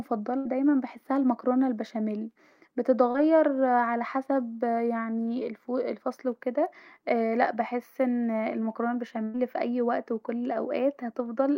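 A burst of packet loss at 0.37 to 0.47 s, just before "دايما بحسها المكرونه البشاميل", drops about 80 ms of the speech. The receiver stretches the last received sound across roughly 74 ms while fading it down, so the gap comes out as a brief dying buzz or hiss before the audio resumes further along.

A short concealed packet loss at 3.11 to 3.16 s, right before "علي حسب يعني الفصل", loses about 40 ms. The decoder extrapolates the preceding sound for about 33 ms and blends back into the real signal, giving a quick smear or wobble at that point.

A second burst of packet loss at 9.24 to 9.36 s, between "لا بحس أن المكرونه" and "في اي وقت وفي", removes about 100 ms. A gap of around 97 ms is filled by a decaying continuation of the last sound, which is heard as a held, fading buzz or hiss before speech picks up again with the intervening part missing.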